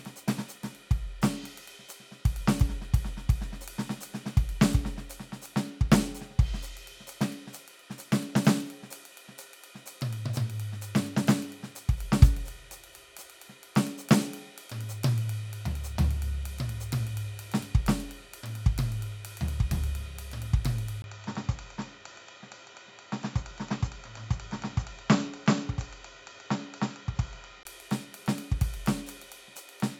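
At 21.02 s the music drops out for 20 ms, then returns duller, about 5 dB quieter, with a noise floor roughly 35 dB down, likely an input switched to a poorer device. The spectrogram shows nothing above 7.6 kHz until 27.65 s, and the waveform shows a gap and a lower envelope.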